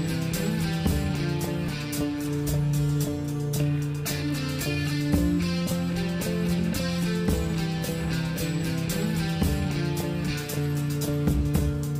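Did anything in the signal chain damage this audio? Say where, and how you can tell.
No, no signal-chain damage audible.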